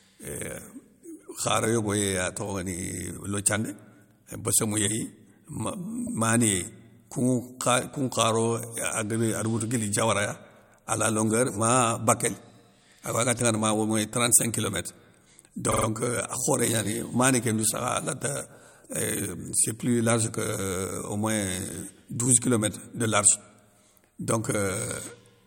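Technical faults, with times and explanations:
6.06–6.13 s and 15.71–15.85 s, repeated frames: a 72 ms block replays once, then a 48 ms block three extra times, giving stutters; spectrogram shows identical copied slices.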